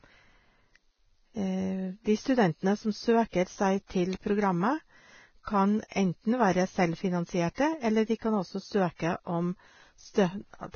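Vorbis compression damages the whole clip heavily. Nothing sounds above 6.6 kHz, and the remaining treble is hissy and grainy, with roughened vowels and blurred onsets. A low-quality Vorbis encode, near 17.5 kbps, is the likely cause, its coarse treble quantisation replacing detail with noise.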